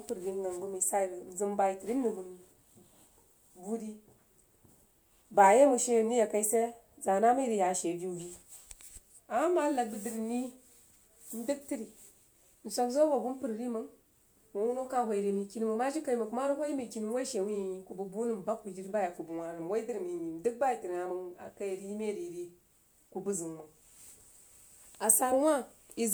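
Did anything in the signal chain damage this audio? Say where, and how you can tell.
No, nothing in the chain has left a mark on this speech that I can hear, so there's no stage to point at here.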